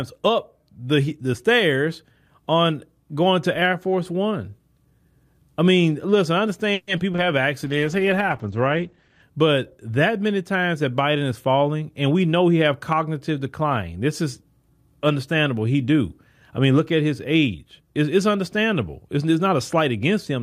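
Repeated packet loss (robotic sound) runs from 6.73 to 7.2 s, just after "I mean listen I". Four gaps open in quick succession, the longest 140 ms. Each is patched by stretching the preceding sound, so 43% of the stretch is concealment and 60 ms simply drops out, giving a choppy, robotic texture.

A call bitrate drop follows from 7.66 to 9.3 s. The encoder is forced onto far fewer bits, which fits a fall from 64 to about 12 kbps, held at its lowest for 1.57 s. Audio bandwidth shrinks from 20 kHz to 8 kHz, so the sound turns muffled, rough and watery until quality returns.

A jitter buffer speed-up occurs from 11.16 to 11.83 s, between "that many times that" and "and we know he", and again from 17.34 to 17.81 s after "mean look at his". The receiver trims small pitch-period slices to shed excess buffered delay, removing around a tenth of a second the first time and half that the second. 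Playback runs at 112% and then 110% with pitch unchanged, sounding hurried.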